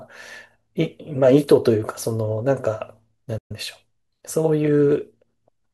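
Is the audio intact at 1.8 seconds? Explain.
Yes, the audio is intact at 1.8 seconds, with no audible fault at that moment.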